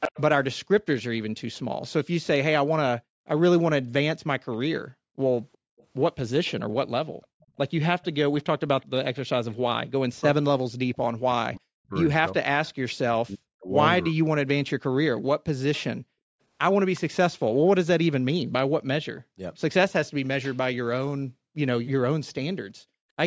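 From 0.00 to 1.21 s an echo leak puts a delayed copy of the speech back under itself, 363 ms late and strong, at about 5 dB below the voice. The likely cause is a speakerphone whose echo canceller let its loudspeaker's pickup through. On a spectrogram the harmonic pattern repeats, shifted right by 363 ms; in the waveform each burst has a slightly weaker twin trailing it.

Between 3.00 and 7.58 s the background is gated by the echo canceller: while the far end plays, it clamps the microphone, so the room tone drops out for about a second in total, by as much as 40 dB, then snaps back. These show as abrupt dark gaps in the noise floor across the whole band, with the waveform's floor flattening to near-silence.

The echo leak recurs from 4.52 to 9.55 s, and as a brief scrap at 12.66 to 12.71 s. Both times it is faint, near 30 dB down, and again 363 ms behind.

From 10.13 to 14.99 s, speech is suppressed in double talk: roughly 3 s of the talker's voice dips or cuts out in pieces, up to around 40 dB, likely because the canceller could not tell the voice from the loudspeaker echo while both sides spoke. 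Spectrograms show harmonics fading or vanishing in patches, and the waveform envelope pinches in ragged chunks.

The echo returns from 15.73 to 20.27 s at about 25 dB down, again 363 ms late. It overlaps further gating of the background from 15.98 to 23.17 s, about 1.5 s of dropouts in all, again reaching 40 dB.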